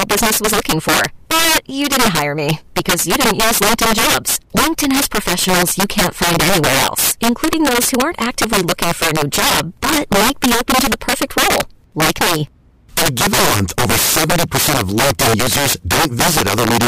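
Integer overflow runs throughout: with gain pushed about 12 dB too high, peaks wrap to the opposite sign instead of limiting, giving violent cracks on louder speech.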